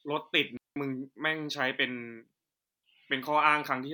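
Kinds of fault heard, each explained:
Digital wireless dropout: the receiver mutes when too much of the link's data goes missing, leaving clean near-silent holes of about 190 ms and 305 ms in this speech. Unlike an analogue radio dropout, no hiss or noise burst surrounds either gap.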